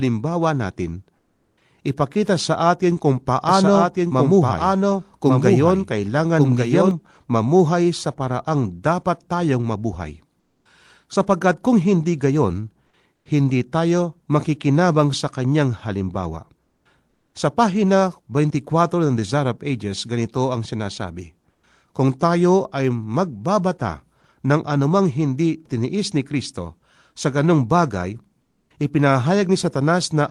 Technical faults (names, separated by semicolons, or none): comfort noise in place of the background; doubled audio track